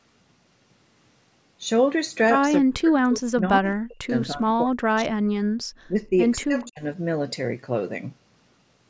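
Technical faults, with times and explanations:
2.58–5.48 s, 5.88–5.94 s and 6.44–6.84 s: speech suppressed in double talk. The speech is pushed down in pieces across about two seconds of the first stretch, dropping by about 40 dB at its deepest. It dips briefly by about 15 dB at 5.9 s, then by about 30 dB in the last stretch. This is likely the echo canceller mistaking overlapping far-end talk for echo and attenuating the near talker along with it.
6.40–6.44 s: echo leak. A faint, delayed scrap of the speech slips through about 230 ms behind the original, sitting about 30 dB below it. This likely comes from a loudspeaker on one side of the call whose echo canceller left some of the microphone pickup unremoved and sent that residue back down the line.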